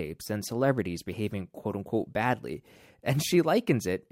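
No technical faults can be heard anywhere in the recording. There is nothing in the speech to mark at any point in time.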